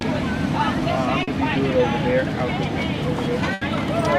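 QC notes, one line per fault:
1.23 to 1.29 s, short concealed packet loss: about 40 ms never arrived, so the decoder stretched the previous sound across the gap, leaving a brief smear.
3.53 to 3.63 s, burst of packet loss: roughly 80 ms went missing in a row; the concealment held the last sound while fading it, then jumped ahead.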